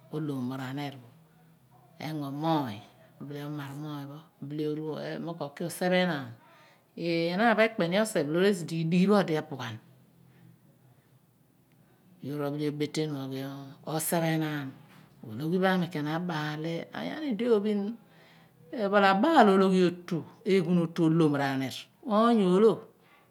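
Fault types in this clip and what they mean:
Nothing stood out on listening to this speech recording.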